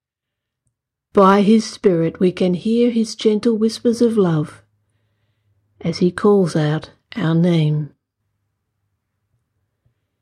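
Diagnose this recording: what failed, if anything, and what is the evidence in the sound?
Hard clipping on the speech, from 1.18 to 1.51 s and again briefly at 1.86 s: the peaks crackle with a gritty edge. The level ran about 3 dB past what the converter or gain stage could pass, so waveform tops were sliced flat, spraying harmonics upward.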